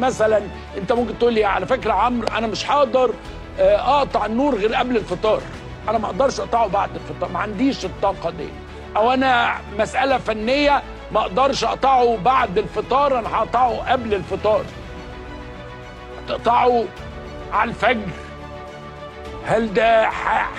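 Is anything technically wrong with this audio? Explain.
No, nothing technically wrong turns up here; the audio simply runs along without any glitches worth pointing out.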